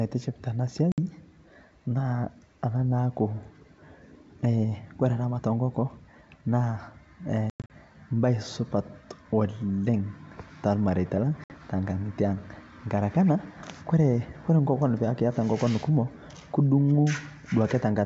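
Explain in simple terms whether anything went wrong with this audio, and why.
Packet loss on an ADPCM call. Speech cuts to silence near 0.92 s, 7.5 to 7.7 s and 11.44 s. Each time, it returns briefly slightly distorted while the decoder catches up.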